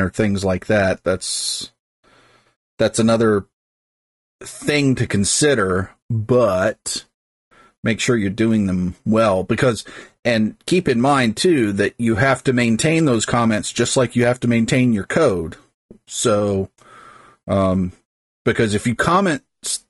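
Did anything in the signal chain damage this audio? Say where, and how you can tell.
Yes, at the codec stage: low-delay AAC compression, likely AAC-ELD at around 32 kbps, leaves the speech grainy throughout, with smeared harmonics and a noise-filled, blurred top band on the spectrogram.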